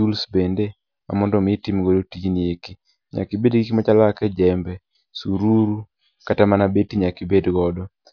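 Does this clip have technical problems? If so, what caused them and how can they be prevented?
No, nothing stood out as a technical problem on listening, so there is no cause to trace and nothing to prevent.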